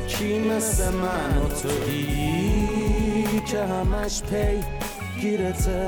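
A doubled audio track runs from 0.43 to 3.39 s: a second, full-band copy of the sound trails the original by around 150 ms at about 5 dB lower, with no decay or room colour, and it starts and stops abruptly. It is likely a second capture through a slower path.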